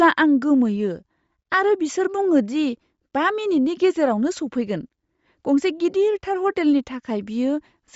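From start to finish the speech carries a breathy, grainy edge, with nothing above 7.7 kHz. This is likely Bluetooth LC3 compression at a low bitrate, consistent with around 32 kbps and 10 ms frames, zeroing upper spectral detail and filling it with noise.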